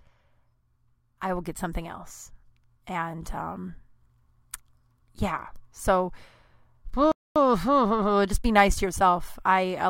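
At 7.12 s the speech cuts off in mid-flow and the output goes completely silent until 7.36 s, a gap of about 0.24 s. This is a playback stall, most likely the player running short of buffered data or its output thread being held up. On a waveform it shows as a flat line with a sharp edge on each side. On a spectrogram it is a clean vertical band of empty black across all frequencies.

From 7.36 s to 9.74 s the player works off its backlog with time-compressed catch-up, running the speech at 1.1 times normal speed. It does this by dropping short slices of audio and cross-fading across the joins. The pitch stays where it was, but the delivery sounds hurried. On a spectrogram the harmonic bands stay at the same heights while syllables and pauses are squeezed closer together.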